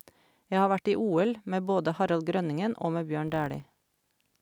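A filter restarted on every block sets in at 3.28 s and runs to the end of the speech clip. The filter loses its stored state at each block boundary and begins every block as if from silence, so each block opens with a small transient. Those transients repeat at 50 Hz, which points to blocks about 20 ms long, and they form a steady buzz under the speech that rises and falls with its level.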